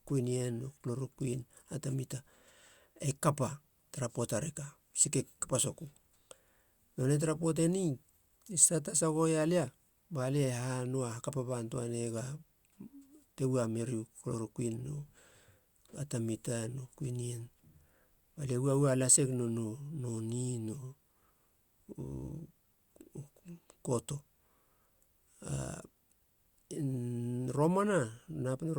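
No technical faults are audible anywhere in the recording.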